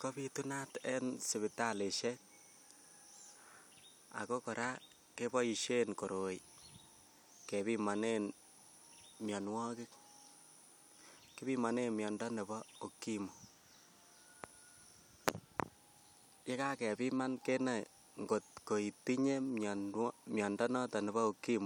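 Nothing here stands out as a technical problem; it's a speech recording, and there's no fault in it to point to at any moment.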